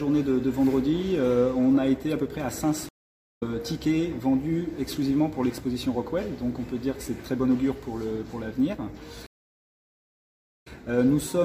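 A stream reconnect occurs at 2.89 s, running to 3.43 s. The connection dropped, the player fell silent for about half a second, then reopened the stream and started a fresh decoder partway through. The sound resumes roughly half a second further on, so material is skipped. Its first instant comes in muted or fading up. A second stream reconnect from 9.26 s to 10.67 s leaves a gap of about 1.37 s, after which the sound picks up from roughly the same point.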